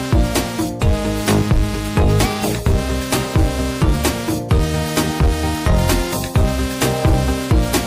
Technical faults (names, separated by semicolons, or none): none